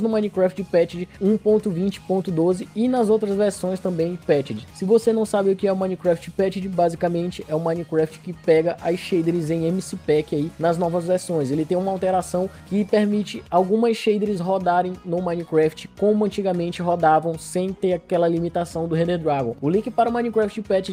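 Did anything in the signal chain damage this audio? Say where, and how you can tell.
No, nothing in the signal chain damaged this audio. I can't point to any stage, from wiring through to playback, that left an audible mark on the sound.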